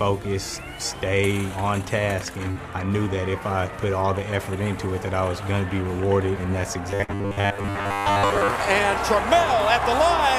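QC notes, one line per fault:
2.51–2.59 s and 7.04–7.11 s, short concealed packet loss: about 40 ms never arrived each time, so the decoder stretched the preceding sound over the gap, leaving a quick smear or wobble.
6.91–8.50 s, robotic sound from repeated short buffers: most of this stretch has a stiff metallic buzz at 100 Hz, likely from the playback looping a 10 ms chunk while waiting on late audio.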